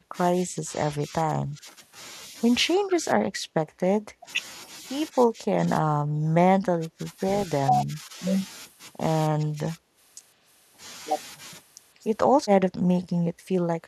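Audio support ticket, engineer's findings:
Speech suppressed in double talk at 0–1.7, 2.65–4.28, 5.13–7.0, 7.47–8.16, 9.3–9.97, 10.36–10.43, 11.96–13.9 s. The talker dips in chunks, from slight to about 25 dB down. Likely the echo canceller attenuating both sides during overlap. On the waveform: gouged envelope. On the spectrogram: faded highs and gaps.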